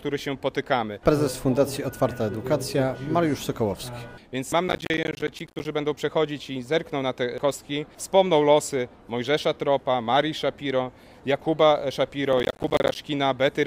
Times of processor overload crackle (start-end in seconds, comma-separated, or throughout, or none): 4.68-5.65, 12.33-12.96